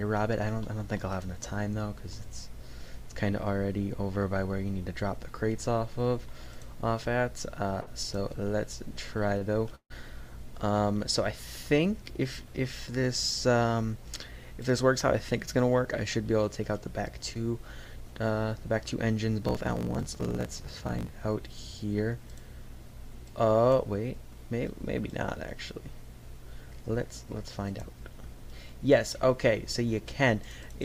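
The audio shows a series of network and buffering faults. Two short stalls from late packets hold the sound too long: about 49 ms at 7.81 s and 30 ms at 9.38 s, each with a slight buzz or dip before resuming intact. From 9.75 to 9.92 s a call audio freeze stretches the sound for about 148 ms, fading into roughly 70 ms of silence, likely caused by packets held up in transit draining the jitter buffer. At 17.34 s a short concealed packet loss leaves a brief smear where about 20 ms never arrived and was patched from the preceding sound. Between 19.41 and 21.17 s a block size mismatch (truncated) produces a 50 Hz buzz and runs the audio 1.16 times fast, which fits 1024-sample blocks being cut short on read. From 26.64 to 28.53 s a jitter buffer speed-up plays the audio at 104% speed without a pitch change, trimming around a tenth of a second of pitch periods to reduce latency.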